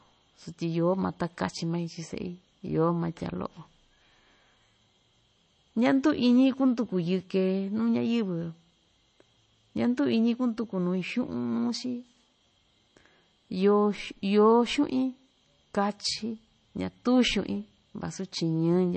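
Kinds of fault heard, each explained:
MP3 compression: The speech has a watery, swirly quality with a hard ceiling, nothing above about 8.3 kHz, which is likely a low-bitrate MP3 encode, around 32 kbps by the sound of it. Weak frequency detail flickers in and out between frames, and the damage is plainly audible throughout.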